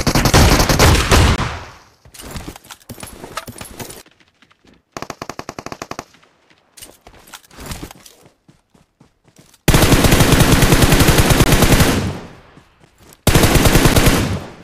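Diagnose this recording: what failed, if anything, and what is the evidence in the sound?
The fault is a block of digital silence at the driver or buffer stage, heard three times: 1.36–1.38 s and 11.44–11.46 s, each a 20 ms hole, and a shorter 12 ms dropout at 13.94 s. The output buffer was likely not filled in time, so zeros went out instead of audio. The sound cuts hard to nothing and back. On a waveform these are flat, near-silent stretches with abrupt edges. A spectrogram shows blank vertical gaps.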